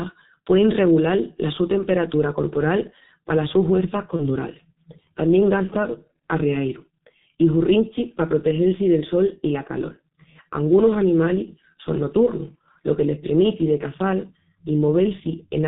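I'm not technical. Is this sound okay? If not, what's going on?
No. The whole recording went through the G.723.1 codec, an old internet-phone compressor that drops everything above 4 kHz, so speech sounds muffled and hoarse, with smeared consonants.

Right after "corporal palas sus huerças", at 4.16 to 4.23 s, there is VoIP packet loss concealed by the speech codec. A 30 ms piece, which fits a single lost packet, was patched by the decoder, leaving a brief stretched, weakened stretch.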